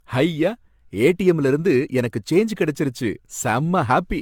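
Across the whole speech clip there is generation loss: a swirly, hollow, smeared quality with blurred consonant onsets, likely from repeated lossy re-encoding, around seven passes, that fits an AAC-LC chain near 96 kbit/s. A spectrogram shows patchy holes and nothing above 17 kHz.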